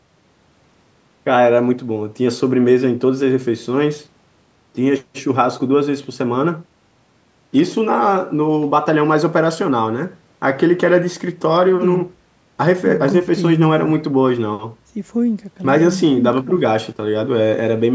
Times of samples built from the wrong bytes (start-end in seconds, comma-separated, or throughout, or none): none